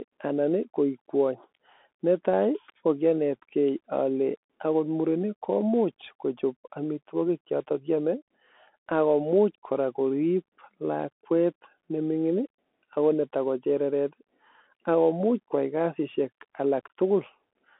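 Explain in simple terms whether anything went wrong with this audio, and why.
Bluetooth CVSD headset codec, from start to finish: the speech was squeezed into a phone-style band of roughly 250 Hz to 3.5 kHz, with nothing above 3.8 kHz. The codec only records tiny up-or-down steps, so sharp sounds smear, s sounds turn scratchy, and a grainy hiss sits underneath.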